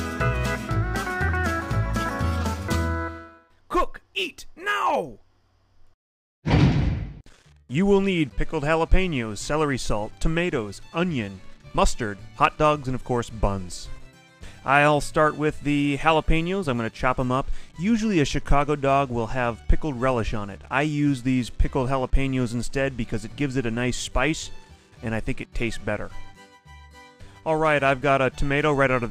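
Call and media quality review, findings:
No call or media quality findings to report for this clip.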